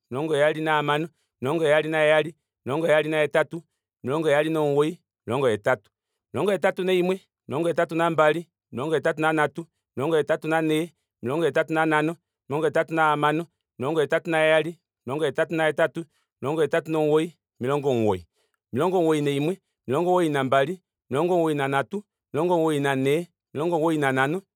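At 10.72 s there's a single sharp click in the speech, and it's likely dropped samples: just a handful went missing, around a tenth of a millisecond, so the waveform jumps straight to a later value. Nothing audible is lost, only that one tick.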